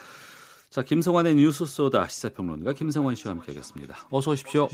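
From 2.71 s to the end, faint repeats about 22 dB down recur roughly every 300 ms. This is feedback echo between two devices: one microphone picks up the other's playback.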